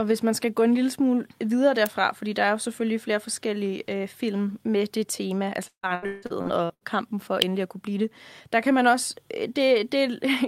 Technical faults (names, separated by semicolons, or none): electrical switching spike; repeated packet loss (robotic sound)